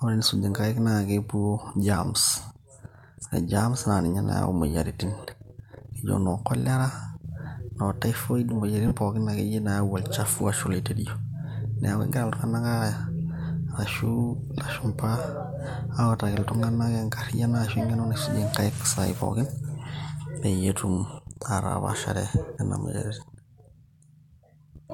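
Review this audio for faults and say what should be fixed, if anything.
There's a short dropout from lost LE Audio frames at 8.88 to 8.91 s, right after "noo typhoid". For about 30 ms, which fits three 10 ms frames, the LC3 decoder fills the gap by replaying the last spectrum with scrambled signs, so the sound smears into a brief noisy blur. To prevent it, strengthen the Bluetooth link with a shorter range or less interference, or allow more retransmissions.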